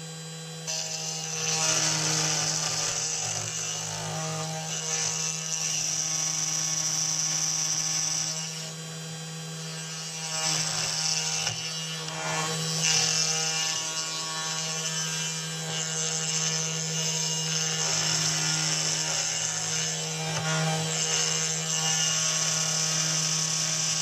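No technical faults are audible.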